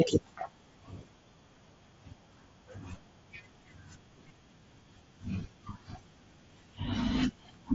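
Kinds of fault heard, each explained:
Concealed Bluetooth headset packet loss: Speech packets from the headset were dropped, and the receiver patched each gap by repeating the closest matching piece of recent waveform. At 0.40 s a 7.5 ms gap fits one lost packet. At 4.29 s a 15 ms gap fits two in a row. The single lost packet is nearly hidden.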